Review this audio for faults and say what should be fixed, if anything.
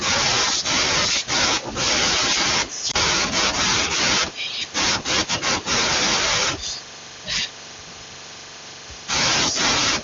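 Lost AMR speech frames at 2.91 to 2.96 s: a brief dip or warble, consistent with a single lost 20 ms frame. The wideband decoder's concealment reused the last good pitch and vocal-tract parameters at reduced gain, and the sound then recovered. To fix this, improve radio link quality or error protection so fewer frames fail their checksum.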